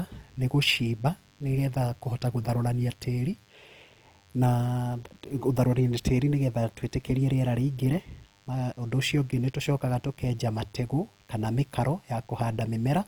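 A nearby DECT cordless phone or base station is sending a radio burst every 10 ms into the audio circuitry of this speech recording, which rectifies it into DECT cordless phone buzz: a thin, steady 100 Hz buzz full of harmonics. It sits well below the speech and runs for the whole clip. The encoding chain is likely Opus compression in its music (CELT) mode, starved of bits in a way that fits roughly 24 kbps. Bands are filled with folded or noisy content instead of being left empty, so the voice sounds plainly grainy and rough throughout. The bandwidth still reaches 20.2 kHz.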